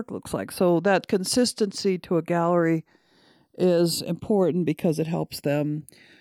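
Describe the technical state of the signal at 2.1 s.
At 2.1 s the speech carries channels drifting apart, present across the whole clip: the two sides run on clocks differing by roughly 100 ppm, so their offset slowly grows toward about half a millisecond. Summed to mono, sweeping comb notches produce a slow flanging.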